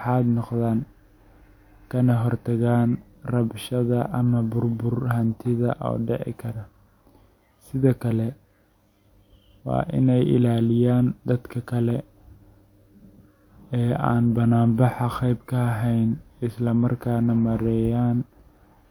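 No technical faults are audible.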